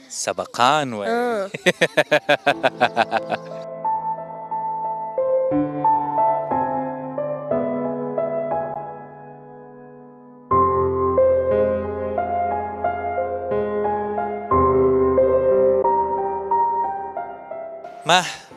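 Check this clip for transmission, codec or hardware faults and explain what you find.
Two short gaps are audible, at 8.74 s and 15.82 s, each a silence of about 14 ms, which fits a single lost frame. This is likely a Bluetooth dropout: a late packet was discarded and playback resumed where it would have been, skipping that moment rather than repeating or stuttering.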